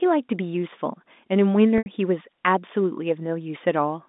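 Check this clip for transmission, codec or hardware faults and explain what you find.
One transmission fault stands out: packet loss with pitch repetition, from 1.78 to 1.86 s, about 80 ms lost, which fits four 20 ms packets. The receiver bridged the gap by looping the last pitch period, so the speech briefly turns into a held, buzzy tone that fades toward silence before the speech cross-fades back in. A plain dropout would cut straight to silence or click. Here the voiced buzz and soft return give it away. The G.711 telephone band around it is intact.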